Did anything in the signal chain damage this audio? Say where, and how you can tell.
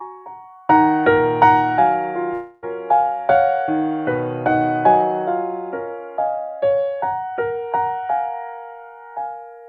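Yes. From 2.33 to 2.64 s the music stops moving forward. For about 290 ms the last sound is drawn out as a fading buzz or hiss, and when the music resumes roughly 300 ms of it is gone. The network stage is the likely culprit, a long network dropout where the receiver stretched its final audio while nothing arrived. A brief packet-loss glitch lasts only tens of milliseconds, and a storage edit would cut abruptly with no smeared fill.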